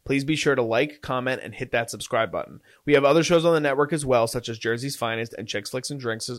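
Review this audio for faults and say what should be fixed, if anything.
Hard clipping runs from 2.94 to 3.37 s, just before "on the network as". The speech there is driven about 5 dB beyond what the signal chain can pass, so its peaks are sheared off, giving crackle on the peaks. On the waveform the peaks are flat-topped, and a spectrogram shows added harmonic energy smeared far up the spectrum for that stretch. Leaving at least 6 dB of headroom in gain staging would prevent it.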